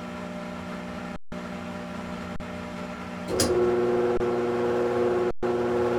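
At 1.16 to 1.32 s, 2.36 to 2.40 s, 4.17 to 4.20 s and 5.31 to 5.43 s the sound drops out in an underrun with held sample, lasting 160, 40, 27 and 120 ms. Each time the output buffer emptied and the converter held its last value, so the waveform sits flat and the sound simply stops with little click. Nothing appears to be lost, and playback picks up where it stopped, so each resumption is soft.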